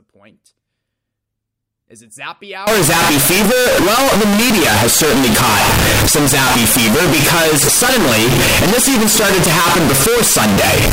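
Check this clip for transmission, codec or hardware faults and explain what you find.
One fault, float read as integer, from 2.67 s after "it zappy" to the end. The 32-bit float samples were likely decoded as 32-bit integers, so sign and exponent bits set each value. The speech becomes a near-square wave at an almost fixed, high level: very loud and harsh, with background noise as loud as the voice, though pitch remains traceable.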